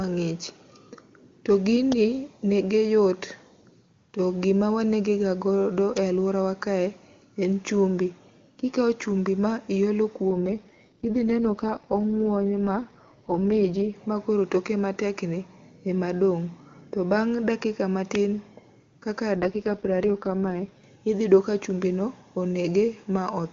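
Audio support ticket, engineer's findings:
Electrical switching spike: sharp snaps layered over the speech at 1.92 s, 5.97 s and 18.15 s, each at most about 11 milliseconds long. Likely a nearby switch, motor or static discharge arcing, with the line picking up the burst.

AMR rate drop: speech turns rough, raspy and synthetic from 10.30 to 13.96 s and again from 19.36 to 20.84 s. Bandwidth holds and there are no gaps. The sound fits AMR-WB being pushed down from its clean 23.85 kbit/s mode to the 6.6 kbit/s floor on a weak radio link, trading bits for error protection, then recovering.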